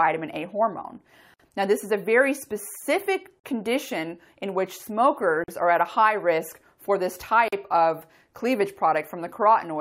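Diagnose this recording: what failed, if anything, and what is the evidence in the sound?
Gap at a join of encoded pieces, at 1.34, 3.40, 5.44 and 7.48 s. These are silences of about 56 ms at the first join and 43 ms at the others, recurring every 2.0 s. The fault is at the codec stage. The audio was encoded in 2-second pieces and joined without trimming, so each piece's leading encoder delay and padded final frame stay in. Continuous sound cuts out, with smeared edges, then resumes where it stopped.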